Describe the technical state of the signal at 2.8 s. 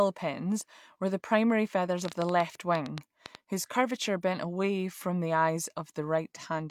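At 2.8 s, sharp ticking pops cut through the speech and its pauses, part of a train of clicks running from 2.05 to 3.36 s, between "were the primary feathers" and "whose curvature bent away". Roughly ten similar clicks arrive unevenly, about 7.7 per second, peaking around 15 dB above the speech, likely from interference or a faulty connection or power supply injecting repeated pulses.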